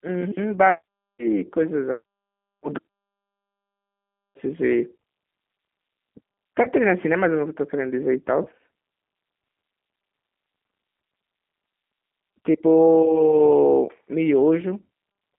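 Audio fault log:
Throughout, G.729 codec: the audio is confined to roughly 200 Hz to 3.5 kHz and sounds rough and synthetic, which fits an 8 kbit/s model-based codec rebuilding speech from a few pulses.
6.63–6.69 s and 8.43–8.47 s, VoIP packet loss concealed by the speech codec: about 20 ms of audio, which fits one lost packet each time, is patched with an extrapolation that fades, and it stays weak or distorted just afterwards.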